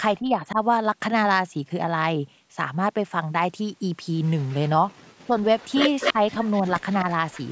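From 0.16 to 0.59 s the speech dips by roughly 10 dB over about 400 ms. This is speech suppressed in double talk, likely caused by an echo canceller that could not tell its own talker from the loudspeaker echo while both sides spoke, and so turned everything down. The clue is that the talker's own level sags, with no extra copy of the sound.

Between 4.42 and 4.55 s a faint repeat trails the speech by 258 ms, sitting about 30 dB below it. That is an echo leak, which points to a loudspeaker on one side whose canceller likely let part of the microphone pickup slip back. Here something is added, not taken away.

At 5.24 to 5.38 s the suppression returns much harder. It drops close to 40 dB for about 150 ms, so the speech almost cuts out, which sets it apart from the gentler first dip.

From 5.59 s to the end the same 258 ms echo comes back, now only about 10 dB under the speech. It is a sustained second voice-like copy rather than a scrap.

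Within that stretch, at 6.13 to 6.19 s, a brief dip of roughly 10 dB lasts about 70 ms while the echo is running.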